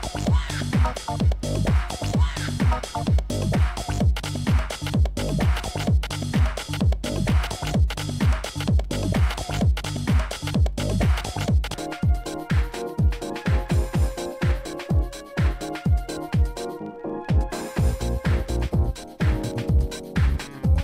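No faults found on this pass; nothing to log.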